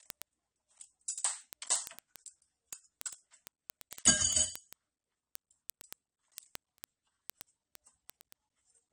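Right from the start the whole clip has a dull, smeared top end with a fizzy, warbly edge on the sustained parts of the sound. That's most likely AAC compression, with a lowered cut-off and patchy high bands that fit a low bitrate around 32 kbps.

From 0.10 s to 8.90 s there's a steady train of sharp ticks, roughly every twentieth of a second, with uneven strength, around 150 in all. Those are word clock ticks: the receiving device runs a few hundred parts per million off the sender's clock, so each slip drops or repeats a single sample.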